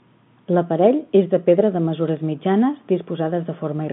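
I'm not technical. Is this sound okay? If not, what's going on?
No, there's one small glitch. At about 2.17 s there's a tiny disturbance. That's bit errors on a digital phone line: the call travels as a stream of ones and zeros, and a few of them got flipped on the way. Each flipped bit corrupts one tiny slice of the sound, and when it hits an important bit you get a sharp click. It's a brief blip, and the error rate behind it is very low.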